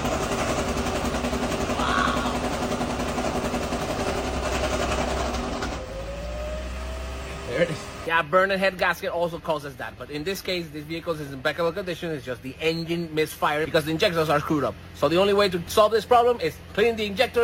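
From 9.23 s to the end, the audio carries crude rate conversion. A gritty, inharmonic fizz rides on louder and brighter passages. Samples seem dropped or repeated without filtering, which fits a 48 kHz to 44.1 kHz change. The error sits roughly 25 dB below the signal.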